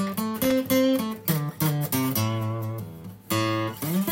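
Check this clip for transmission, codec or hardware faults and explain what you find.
One hardware fault stands out: loose connector crackle from 0.44 to 0.52 s, a burst lasting about 80 ms. A worn or dirty contact is making and breaking as it shifts, so the signal is chopped on and off, and any DC on the line turns each reconnection into a pop. It sounds like a short, irregular scratch. On a waveform it shows as jagged dropouts and spikes; a spectrogram shows ragged vertical broadband streaks.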